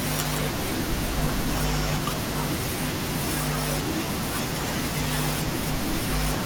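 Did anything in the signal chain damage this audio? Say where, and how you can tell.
No, nothing in the signal chain can be heard to have damaged this speech recording at any stage.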